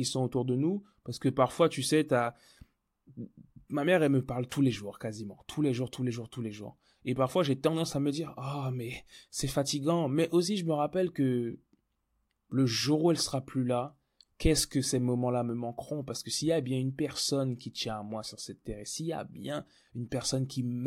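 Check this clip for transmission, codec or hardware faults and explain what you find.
Nothing stood out on listening to this speech recording; no audible problems were found.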